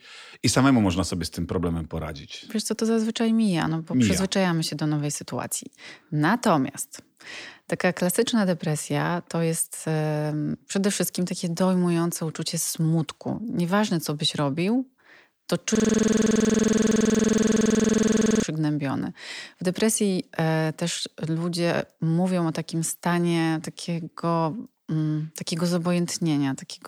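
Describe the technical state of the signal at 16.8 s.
At 16.8 s the speech has become a rapid, mechanical stutter: one 46 ms fragment repeats about 21.5 times a second from 15.75 to 18.43 s. This is a system hang loop, where the system froze while the sound hardware kept replaying one ring buffer, which fits a 2048-sample buffer.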